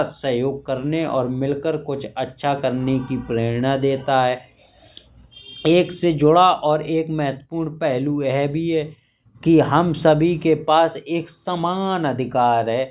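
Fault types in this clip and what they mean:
There are no fault types in this clip.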